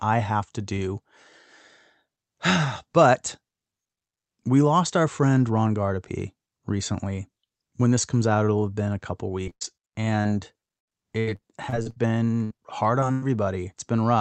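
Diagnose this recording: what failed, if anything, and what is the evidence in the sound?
Repeated packet loss (robotic sound) at the network stage, 9.43–9.75 s after "have been a couple" and 10.22–11.98 s: gaps up to 90 ms, each patched by extending the last sound, recur closely, giving choppy robotic speech rather than one isolated hole.

Burst of packet loss at 12.44–12.52 s and 13.12–13.24 s: roughly 60 ms and 100 ms of consecutive packets lost, heard as the last sound held and fading before speech resumes with material skipped. These are single holes, not a chain.

Short concealed packet loss at 12.56–12.60 s and 13.00–13.04 s: about 20 ms each missing, filled by the decoder and blended back. The result is a brief smear or wobble, too short for the fading buzz of a burst.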